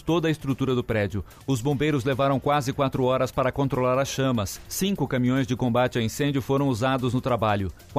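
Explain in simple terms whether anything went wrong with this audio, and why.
Nothing went wrong here; the audio has no audible faults.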